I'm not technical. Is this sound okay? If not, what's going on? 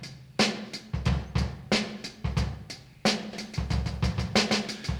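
No. A doubled audio track starts abruptly at 3.33 s and runs to the end: the same sound plays twice, with a second copy trailing behind by roughly a sixth of a second and a bit quieter than the original. The copy is clean and full, with no fading or roomy echo, so it sounds like a stutter laid over everything. This is likely from the sound being picked up a second time through a slower route, or from two copies left out of step in an edit.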